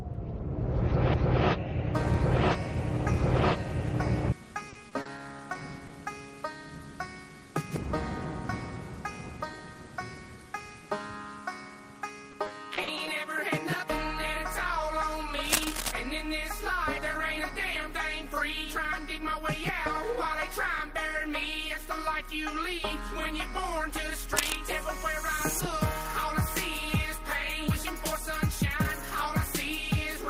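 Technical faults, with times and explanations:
4.69–5.91 s and 12.31–13.07 s, repeated packet loss (robotic sound): the stream lost or received late a run of short packets, four gaps in the first stretch and five in the second, none longer than 40 ms. Each hole was patched by stretching the last bit of audio forward, about 120 ms and 140 ms of patching in total. That fill covers roughly a tenth of the first stretch and nearly a fifth of the second, so the sound turns choppy, with small pieces missing.
15.44–15.92 s and 24.36–24.57 s, cable scratch noise: the likely cause is a worn cable, connector or control being moved, so its contact resistance jumps about quickly and lets dense, uneven bursts of noise into the signal. The bursts sit only about 5 dB below the audio, so they come through as a brief scratching or rustling over the sound, for about half a second the first time and about a fifth of a second the second time.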